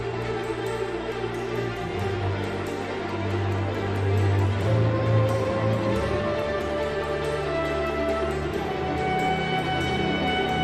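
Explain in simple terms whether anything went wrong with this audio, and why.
Nothing went wrong here: the audio runs without any audible faults, so there is nothing to fix.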